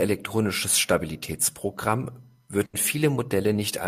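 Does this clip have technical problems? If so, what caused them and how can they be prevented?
Yes. A burst of packet loss occurs at 2.65 to 2.75 s. The last sound is held and faded for 80 ms, then 80 ms is skipped. Forward error correction would prevent it.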